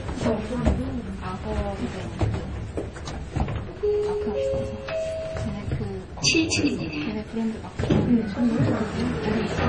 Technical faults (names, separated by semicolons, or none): MP3 compression